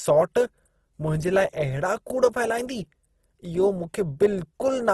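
A speech clip with plainly audible codec damage throughout. The upper harmonics sound rough and grainy, with a noisy, sandpapery texture rather than swirling. Nothing is present above about 12.3 kHz. This is likely Opus compression in its music (CELT) mode. When bits are scarce, that mode refills thin bands with folded or noisy content, so detail turns coarse. The damage points to a low rate, around 16 kbps.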